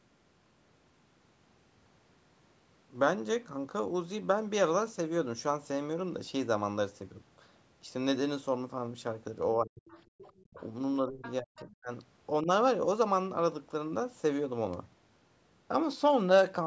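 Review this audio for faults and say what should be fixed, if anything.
The talker's speech drops out in pieces between 9.57 and 12.49 s: it sinks by about 40 dB at 9.57–9.86 s, 10.45–10.59 s and 11.05–11.91 s, and dips more gently, by about 10 dB, at 12.42–12.49 s. The gaps total around a second. This is most likely speech suppressed in double talk. With both parties talking at once, the echo canceller could not tell the local talker from the loudspeaker echo and attenuated everything. The fix is a double-talk detector that holds suppression back while the near-end talker is active.

A second, fainter voice runs under the talker at 9.88–10.67 s, about 25 dB below the speech, and again at 11.22–11.76 s, about 20 dB below. It overlaps the dropouts. This is likely the other side's voice leaking through. The far end played from the loudspeaker, and the echo canceller left a residue of it in the microphone signal. 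Longer adaptive filters with better convergence, or a headset, would keep the loudspeaker out of the microphone path.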